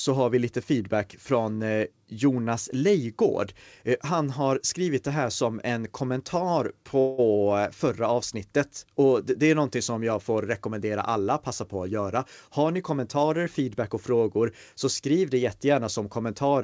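A speech recording carried over a call link, with the audio band ending at 8 kHz, which points to a wideband call codec such as G.722. From 7.00 to 7.21 s the sound stalls: the final fragment before the break is stretched into a fading buzz lasting about 182 ms, after which the speech resumes exactly where it stopped, with nothing lost. This is a call audio freeze, likely caused by packets arriving late so the jitter buffer emptied and the receiver extended the last sound until data returned, pushing everything after it later by that amount. From 12.48 to 13.90 s the speech runs hurried, about 109% of normal speed, with its pitch unchanged. That is a jitter buffer speed-up: with more audio queued than the target delay, the receiver repeatedly cut out short pitch-period slices, removing roughly 150 ms in total to catch up.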